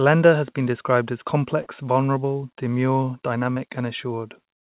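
At 1.62 to 1.68 s, just after "has been described as", the speech briefly smears and wobbles, and at 3.54 to 3.58 s, after "vulnerable demure", a shorter blur follows. Both are short concealed packet loss: about 40 ms and then 20 ms of audio arrived too late, and the receiver filled each gap by extending the preceding sound before blending back. The call path's band limit leaves nothing above 4 kHz, consistent with G.711 mu-law.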